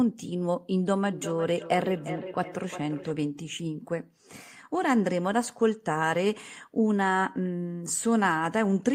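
From 0.96 s to 3.15 s the speech is followed by a feedback echo between two devices. A second device in the same room plays this microphone's signal back into it, and the local echo canceller cannot remove sound it did not produce itself. Each phrase returns at an interval of roughly 0.4 s, thinner and more resonant than the original, with the loudest repeat about 12 dB below the direct speech.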